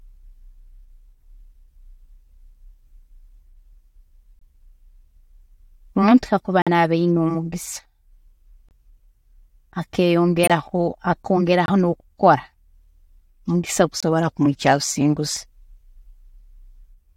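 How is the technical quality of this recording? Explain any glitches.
The recording has six brief dropouts, at 4.39, 6.62, 8.69, 10.43, 11.66 and 14.00 s. These are corrupt frame muted faults: the speech abruptly vanishes for about 30 to 75 ms. Damaged compressed frames were rejected by the decoder and replaced with silence, so the timing does not shift.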